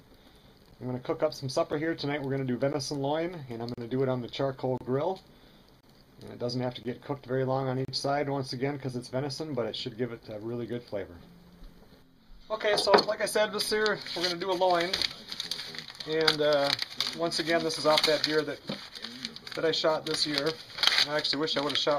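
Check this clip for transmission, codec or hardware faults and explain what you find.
A single fault runs through the first eight seconds.

Gap between stream segments at 0.71, 1.72, 2.73, 3.74, 4.78, 5.81, 6.83 and 7.85 s. Each new one-second segment starts slightly later than the previous one ends, and the player fills that time-stamp gap with silence. The result is a series of hard-edged holes, roughly once a second, lasting between about 6 and 35 ms. The longest are at 3.74 and 7.85 s. The sound resumes intact after each hole, because nothing is lost.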